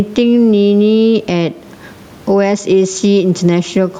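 Throughout the speech, the level swings by about 15 dB, with loud and soft passages squashed together. This is gain pumping, likely from the microphone gain being set far too high so that a fast limiter clamps down on each peak, while the room noise sits about 37 dB below the speech.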